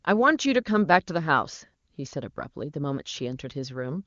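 No technical faults can be heard in this speech.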